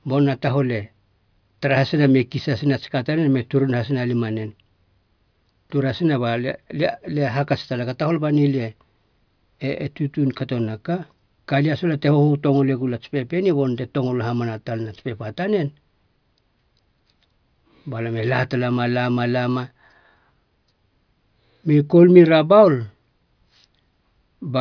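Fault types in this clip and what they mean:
No fault types are present: nothing in the recording registers as a technical defect.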